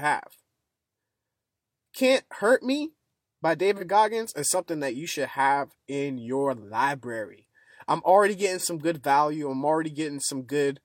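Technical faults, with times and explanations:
3.76–3.83 s and 8.58–8.65 s, AAC frame loss with concealment: a brief smeared, noisy patch of about 43 ms each time, which fits a single dropped frame. The decoder patched the gap by reusing the previous frame's spectrum, so the speech blurs for a moment rather than cutting out.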